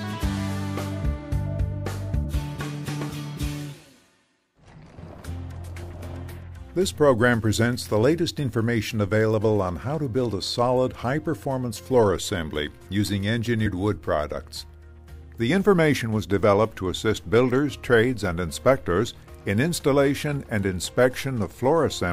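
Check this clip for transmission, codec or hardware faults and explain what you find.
Two brief forward jumps occur, at 2.24 s and 13.65 s. At each, the audio lurches ahead by about 70 ms, with a short blip or click at the join. This is compressed frames skipped: a few whole frames, each about 26 ms long, were missing or refused by the decoder as damaged, so playback leapt past them.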